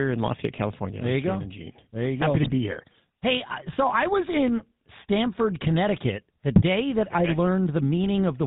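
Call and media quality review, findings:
GSM full-rate codec, whole clip. Speech passed through a vocal-tract model driven by regular pulses, with only every third excitation sample kept and nothing above 4 kHz. Result: plainly audible buzzy, gravelly roughness throughout, consistent with a 13 kbps full-rate GSM leg.

GSM bit errors, 2.40–2.54 s and 6.56–6.63 s (second burst shorter, ending just before "that okay I"). Flipped bits reached the decoder, corrupting filter, pitch or gain parameters frame after frame. Result: speech breaks into squawking, popping, gargling sound for each burst's duration.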